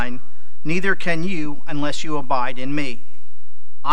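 Across the whole speech clip there is nothing distinct to hear from this fault, yet it is present from start to finish: a DC offset. The entire waveform sits displaced from zero by a constant amount, about -11 dBFS, so a steady component lies at the very bottom of the spectrum, below anything audible. That fixed shift eats into headroom on one side, leaving the peaks less room before they reach full scale.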